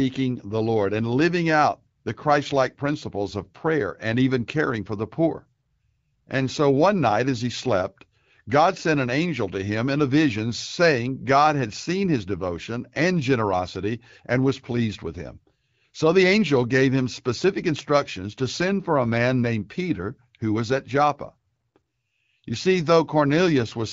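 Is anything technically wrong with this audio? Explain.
No, nothing stood out as technically wrong when listening to this speech clip.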